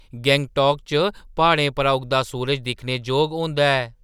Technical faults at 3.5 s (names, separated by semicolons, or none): crude rate conversion